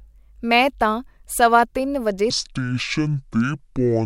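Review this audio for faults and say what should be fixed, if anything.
From 2.30 s to the end, just after "ਤਾਂ ਸਵਾ ਤਿੰਨ ਵਜੇ", a section at the wrong speed runs at 0.556 times normal. The speech drops about ten semitones and drags, likely from playback against the wrong clock. On a spectrogram the harmonics and formants sink and stretch in time, and the waveform's cycles visibly lengthen. Resample that section back to its true speed, and prevent a repeat by confirming the sample rate matches whenever segments are edited or joined.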